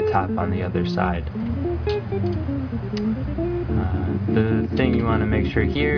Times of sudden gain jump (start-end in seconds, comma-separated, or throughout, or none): none